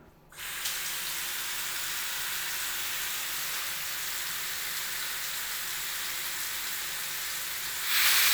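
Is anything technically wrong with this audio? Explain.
No, nothing in this recording of sounds points to a technical problem in how the signal was captured, processed or delivered.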